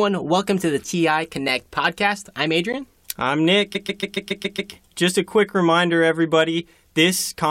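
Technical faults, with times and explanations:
2.73 s, block of digital silence: Just after "podcast I'm", the sound drops out for about 11.6 ms, which fits a 512-sample output buffer that was not filled in time and went out as zeros. The signal cuts to silence and back with no fade, so it is heard as a brief tick or pop. On the waveform it is a flat, silent line framed by abrupt steps. A spectrogram shows a thin vertical gap with a broadband streak at each edge.
3.74–4.72 s, repeated frames: One stretch of about 139 ms, the length of roughly six compressed frames, is played seven extra times in a row. The result is a stutter that adds about 0.98 s to the clip. On the waveform the same short shape appears side by side eight times. On a spectrogram the identical pattern tiles across the range.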